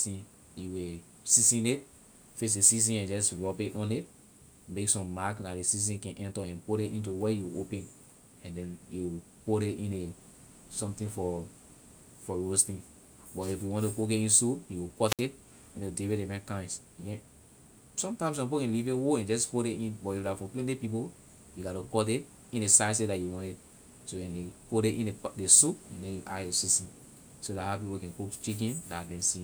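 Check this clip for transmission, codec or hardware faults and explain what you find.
One fault is audible: a wireless microphone squelch dropout from 15.05 to 15.23 s, right after "in soup you". The analogue radio link weakens, so hiss briefly rises. The receiver's squelch then closes, muting the output for 61 ms. The speech then returns.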